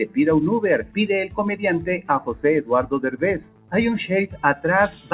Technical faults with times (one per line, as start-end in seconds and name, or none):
0.00-5.13 noise suppressor applied to music or sounds
0.82-0.97 sound cut by the noise suppressor
3.50-3.73 sound cut by the noise suppressor
4.27-4.64 sound cut by the noise suppressor